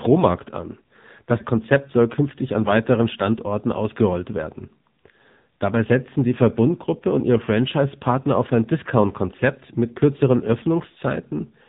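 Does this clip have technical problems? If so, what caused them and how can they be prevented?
Yes. AMR narrowband mobile codec damage runs throughout the speech. The sound is cut off above about 3.8 kHz, so sibilants and consonant detail are missing. The voice has a buzzy, synthetic quality because the codec rebuilds each 20 ms frame from a vocal-tract model excited by a handful of pulses. The heavy damage points to one of the lowest AMR-NB modes, which fits a bitrate near 6.7 kbps. To prevent this, record or transmit through a wideband path such as AMR-WB, or a higher-bitrate mode.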